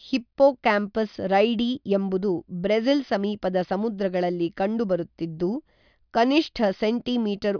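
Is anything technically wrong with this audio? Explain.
No, nothing stood out as technically wrong on listening to this speech recording.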